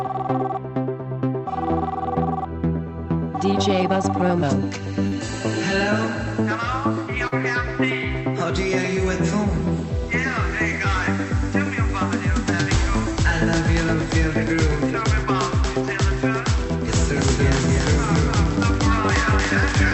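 At 5.07 s and again at 7.27 s, short concealed packet loss leaves a brief smear or wobble. Each time, about 40 ms of audio failed to arrive in time, and the receiver bridged the gap by extending the preceding sound before blending back into the real signal. On a spectrogram, each spot shows a short stretch of smoothed, repeated texture where the fine detail stops changing. The waveform looks unnaturally regular across those few hundredths of a second.

From 16.88 s to the end, a doubled audio track appears. A second full-band copy of the sound runs roughly a third of a second behind the first, at about the same loudness, so every event is heard twice with a flat, echo-like stutter and no room decay. The likely cause is a second capture through a slower path. The copy starts abruptly rather than fading in. On a spectrogram, each feature repeats at a fixed offset, and like the original it stops at the 8 kHz limit set by the call codec. 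The waveform shows matching envelopes displaced in time.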